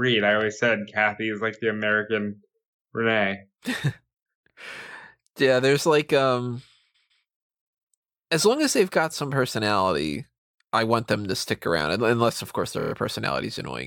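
Repeated frames: at 6.94 s, after "yeah there's like um", a 157 ms block of compressed frames was delivered twice more, stuttering for about 0.31 s. At 12.79 s, after "of course", a 26 ms block repeats five extra times, a rapid stutter adding 0.13 s.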